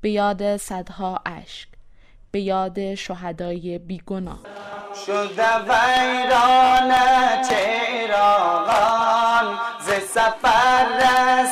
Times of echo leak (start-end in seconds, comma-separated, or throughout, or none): none